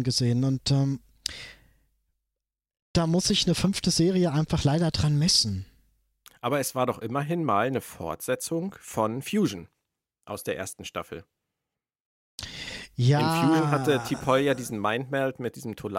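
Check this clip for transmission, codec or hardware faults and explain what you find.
No faults detected.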